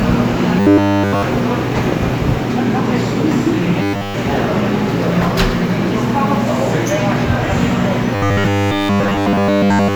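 From 0.60 to 1.23 s, 3.82 to 4.14 s and 8.15 s to the end, the everyday sounds turn into a rigid metallic buzz at 100 Hz: robotic sound from repeated short buffers, likely a 10 ms chunk replayed over and over, with nearly all new audio skipped.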